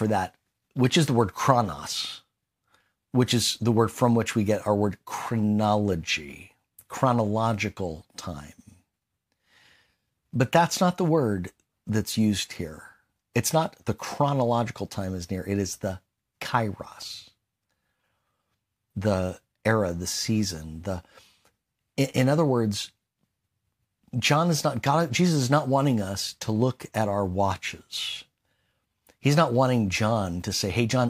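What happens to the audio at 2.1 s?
Nothing goes wrong at 2.1 s; the speech plays through that moment intact, with no dropout, click or other fault.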